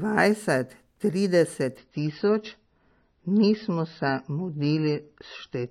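Speech whose treble abruptly collapses at 1.77 s and stays dull through to the end. From that point nothing is heard above about 5.9 kHz, sibilance loses its edge, and a swirly, watery codec texture settles over the sound, with no gap or dropout at the switch. That sudden, seamless step down is an adaptive stream at a lower bitrate: the player moved to a leaner encoding when the connection slowed. The audio points to an MP3 stream falling from about 128 kbit/s to around 24 kbit/s.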